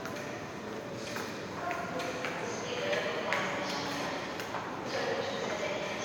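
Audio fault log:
Throughout: generation loss. The sound is swirly, smeared and hollow, more than a single MP3 pass near 128 kbit/s would leave. Sharp onsets are blurred and soft. This is likely from repeated MP3 encoding, around seven times. Each re-encode quantises the signal again on a shifted frame grid. The noise and spectral gaps from every pass stack up. The top end stops at 20 kHz.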